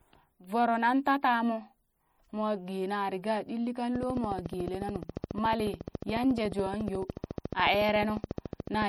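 Speech clip with plainly audible MP3 compression throughout: watery, swirling artefacts and smeared attacks, likely from low-bitrate encoding, consistent with roughly 48 kbps. From 3.96 s to 8.83 s, just after "ɗilli kang", a train of clicks ticks regularly at 14 per second, about seventy in all, peaking around 10 dB above the speech, likely from interference or a faulty connection or power supply.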